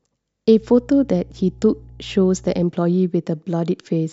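Mains hum runs from 0.57 s to 2.66 s under the speech, a steady low tone at 60 Hz with a few low harmonics above it. Power-line current has found its way into the signal path, most plausibly through a ground loop between connected equipment or magnetic coupling from a nearby transformer. The hum sits roughly 25 dB below the speech, quiet but constant, and it stops at 2.66 s.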